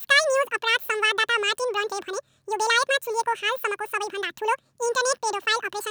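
Throughout the speech, the audio is read two samples at a time (double speed). The reader treats each pair of samples as one frame, as if the data were two channels or double-width samples. Playback runs at 2x and an octave high.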